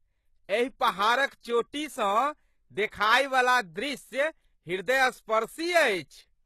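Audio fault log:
Throughout: HE-AAC compression, likely at a low bitrate around 16 kbps, codes only the lower band and synthesises the treble by copying it upward; nothing real survives above about 12.3 kHz, so s sounds come out gritty, metallic and lispy, with plainly audible codec damage.
2.87 to 2.92 s: pre-echo, where the codec's block-wide quantisation noise spills ahead of a sharp attack, so a short hiss leads the onset by about 53 ms and the attack itself sounds softened and smeared.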